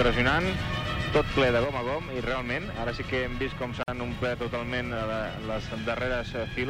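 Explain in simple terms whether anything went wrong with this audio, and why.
At 1.64 s the sound suddenly gets quieter and stays that way to the end. This looks like one channel drops out. The audio was recorded in stereo, with a left and a right side. When both sides are mixed together, anything they share is doubled. If one side goes missing, that shared part loses half its strength, and anything heard only on the missing side vanishes. The abrupt, lasting drop likely points to this here.

At 3.83 s the sound stops for about 49 milliseconds, then resumes at 3.88 s exactly where it left off. This is a gap at a join of encoded pieces. The audio was compressed in separate chunks and then glued back together. Each chunk carries a little built-in silence at its start and some padding at its end. When nobody trims those away, a short hole opens at the join, with blurred edges.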